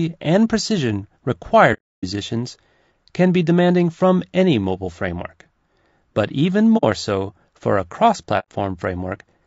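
Throughout the speech there is a rough, grainy texture, with noise filling the gaps between the voice's harmonics and a thin, synthetic top band. This is most likely low-delay AAC compression, of the AAC-ELD kind used in video calls. Its short frames resolve pitch harmonics poorly, and at a bitrate that sounds to be around 32 kbps there are too few bits to fill them cleanly, so the damage is plainly audible.

From 1.73 to 2.05 s the sound fades away into a soft-edged silence of about 300 ms and then fades back. At 6.77 s a shorter hole of 70 ms or so falls between "but even" and "so for a cross". From 8.39 to 8.49 s, just after "so for a cross", there is another gap of about 100 ms. Each is AAC frame loss with muting: whole frames went missing and the decoder zeroed their spectrum, and the overlapping windows turned the cut into a brief fade rather than a hard edge.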